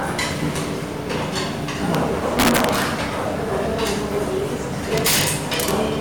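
Integer overflow hits at 1.95 s, across 2.39 to 2.82 s, at 3.87 s and from 4.98 to 5.71 s. Peaks pushed past full scale, by about 6 and 8 dB in the two longer stretches, wrap to the opposite sign instead of being limited, so loud moments crack far harder than clipping would.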